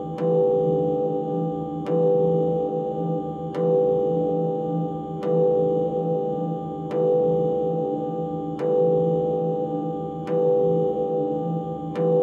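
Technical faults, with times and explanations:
No technical faults can be heard in this recording of sounds. Nothing in it calls for a time or an explanation.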